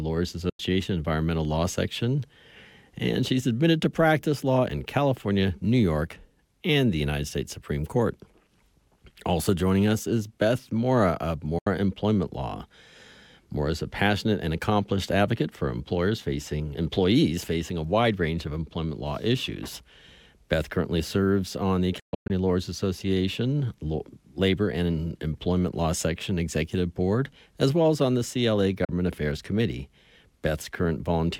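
Bluetooth dropouts at 0.49–0.60 s, 11.58–11.67 s, 22.00–22.30 s (several short gaps, the longest about 0.13 s) and 28.85–28.89 s cut the audio to silence, then it resumes as if it had played on, likely from packets arriving at the headphones too late.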